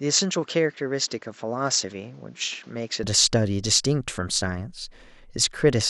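From the start of the clip to 3.03 s, the speech is band-limited, with nothing above 7.7 kHz, and sits roughly 5 dB lower, with a noise floor some 35 dB beneath the signal. This points to an input switched to a poorer device, likely a lower-grade microphone. At 3.03 s the fuller tone and level return abruptly, with no silence at the switch, so the change is heard as a sudden opening of the top end.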